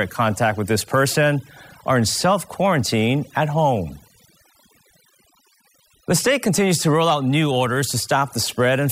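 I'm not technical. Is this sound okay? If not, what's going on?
No. Throughout the clip, the gaps between phrases drop to an unnatural near-silence dotted with twinkling, chirpy specks. This is overdone noise removal: a cleanup tool was pushed too hard on a noisy speech recording. It shut down any part of the sound it judged to be noise, and it took the softer parts of the voice with it.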